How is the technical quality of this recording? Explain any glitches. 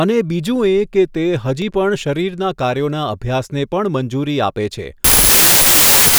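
The recording has one serious glitch near the end. From 5.04 s to the end at 6.18 s, a wrong sample width fault appears: the data seem written as 32-bit samples but read as packed 24-bit, so the speech sinks under loud noise, slowed to 0.75 speed with lowered pitch.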